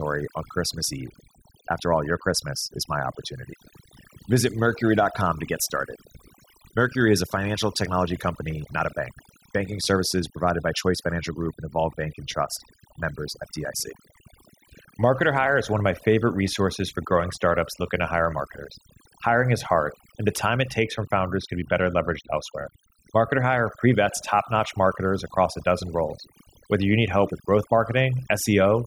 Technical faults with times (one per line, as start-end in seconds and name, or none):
0.00-28.86 overdone noise removal